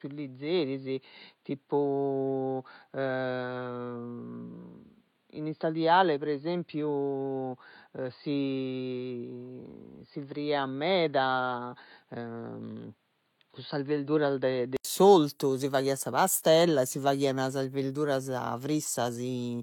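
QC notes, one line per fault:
0.00–14.85 s, input switched to a poorer device: the input path was likely on a lower-grade device until 14.85 s, then changed to a fuller one. Until then nothing is heard above 4.8 kHz, so the speech sounds dull and boxy. It is about 5 dB quieter and carries its own noise floor about 45 dB below the speech. An 80 ms gap marks the switch, and the sound opens up with "s'ortu si faghiat sa".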